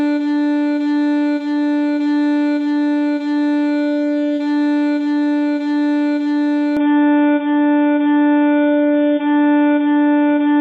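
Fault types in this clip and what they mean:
Input switched to a poorer device: From 6.77 s to the end the sound suddenly goes dull and boxy, with nothing left above about 3.7 kHz. The level shifts by around 5 dB and a new background hiss appears, well below the signal, all with no gap at the change. The likely cause is the recording jumping to a different microphone or a headset's call profile, which passes a narrower band and carries its own tone and noise.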